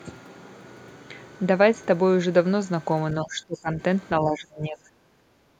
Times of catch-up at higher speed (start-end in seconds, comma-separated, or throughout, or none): none